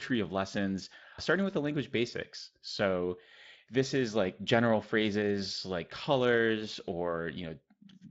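Speech, with no technical faults to report.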